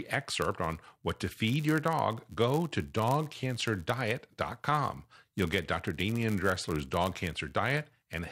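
From start to finish the speech carries a block size mismatch with zero padding. One stage hands over blocks slightly shorter than the next stage expects, and each shortfall is filled with silence. That tiny gap recurs at the block rate, producing a steady buzz at about 99.6 Hz under the voice. Because every block is stretched by the padding, the speech runs at 0.996 of its proper speed, a fraction slow, with timbre unchanged.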